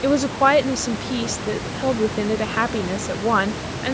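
No technical fault can be heard in the speech: the call microphone processing trims the lowest bass and leaves nothing above 8 kHz, as expected for that path, and the room noise stays about 10 dB below the voice.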